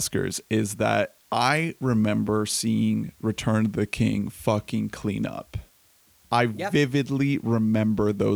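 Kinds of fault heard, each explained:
Low bit depth with dither: The speech has been stored with far too few amplitude steps, consistent with roughly 9 bits, and random dither was added before each sample was rounded. That trades the rounding error's harsh, signal-dependent distortion for steady broadband noise. Across the whole clip this shows as an even, constant hiss sitting about 35 dB below the speech, present during pauses as well, with the voice itself staying clean and undistorted.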